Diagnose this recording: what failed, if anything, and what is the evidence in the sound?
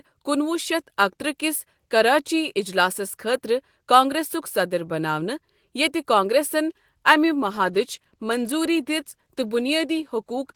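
A call bitrate drop, down in the codec stage, sets in at 7.15 s, right after "یتہِ کانگریسن", and holds for the last 3.4 s of the clip. The speech turns coarser and rougher there, which fits the encoder's target falling from about 32 kbps to 16 kbps. The call's bandwidth estimate sagged, the encoder was told to spend half the bits, and it never climbed back before the recording ended.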